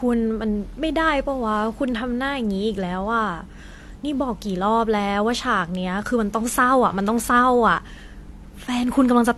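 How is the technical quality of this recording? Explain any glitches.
The technical quality is limited by compression damage running through the whole speech clip. This is transcoding between lossy codecs: there is nothing above 13.2 kHz, and two different kinds of coding artefact sit on top of each other. The likely cause is an AAC-LC encode at around 48 kbit/s re-encoded as HE-AAC at around 40 kbit/s. The second encoder spent bits preserving the first one's smearing and added its own synthetic, swishy top band. A single low-bitrate encode would show only one artefact character, not this layered mix.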